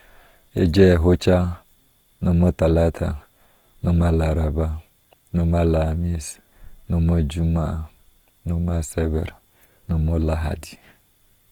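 Throughout the speech, Opus compression is plainly audible. Tones sound grainy, rough and noisy. Bands are filled rather than dropped, which likely points to CELT mode near 24 kbps.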